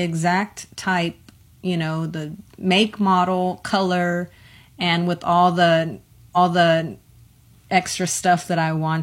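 At 6.32 s there's a stream segment repeated: the player served the same chunk twice, so just under a second of the speech plays again, through 7.29 s, adding about 0.98 s. You'll catch a small blip right where it jumps back.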